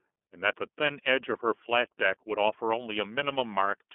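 From start to finish the speech runs through the iLBC codec, squeezed into a phone-like band of roughly 250 Hz to 3.5 kHz with nothing above 3.8 kHz. Each frame is coded on its own, which fits the 13.33 kbps, 30 ms mode, and it sounds plainly rough and synthetic.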